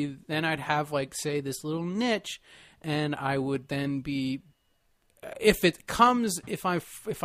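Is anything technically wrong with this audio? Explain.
No, nothing technically wrong can be heard here.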